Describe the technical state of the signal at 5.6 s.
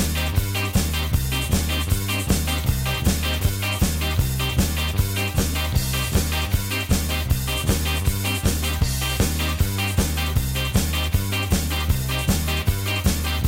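At 5.6 s the signal is intact, with no dropout, distortion, glitch or other fault audible at that point.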